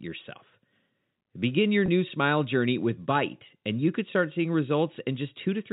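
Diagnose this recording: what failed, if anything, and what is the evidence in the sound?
At the network stage, a short burst of packet loss with pitch repetition hit the stream from 1.86 to 1.88 s, just before "smile journey with". About 20 ms of audio went missing, which fits a pair of 10 ms packets, and the receiver's concealment filled the hole by looping the last pitch period. The sound briefly holds and turns slightly buzzy rather than dropping out. The G.711 mu-law telephone band around it carries on normally.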